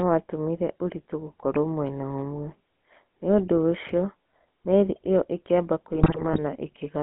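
GSM full-rate codec coding runs through the whole clip. The speech has been squeezed through a vocal-tract model driven by a sparse, regularly spaced pulse train, at a rate that fits 13 kbit/s. Only the band from about 200 Hz to 3.4 kHz survives, so the sound is thin and boxy. The coarse excitation leaves a plainly audible buzzy, gravelly roughness on every voiced stretch.

GSM bit errors strike from 5.92 to 6.39 s. Over roughly half a second, corrupted bits reach the decoder, which fits a bit error rate of around 2 percent. Damaged filter, pitch and gain values distort the spectrum and throw the level around frame by frame. The result is a burst of squawks, pops and gargling that breaks up the speech.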